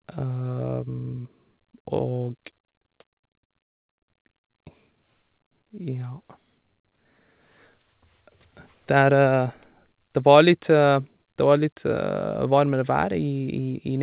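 From 2.6 to 4.55 s, the speech breaks up with repeated packet loss, giving a robotic sound. About two dozen gaps arrive in quick succession, the longest near 0.2 s. Each is patched by stretching the previous sound, so roughly a third of this stretch is filled-in and choppy. The band stops at 4 kHz, which fits a G.711 call codec.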